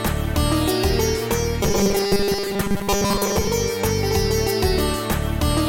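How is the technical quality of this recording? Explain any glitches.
The recording has one clear glitch. From 1.63 to 3.48 s the sound turns into a rigid, metallic buzz fixed at 200 Hz: robotic sound from repeated short buffers. Fresh audio likely arrived too slowly, so a 5 ms slice was looped over most of that stretch.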